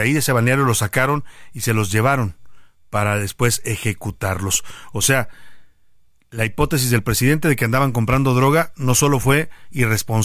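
No technical faults are audible.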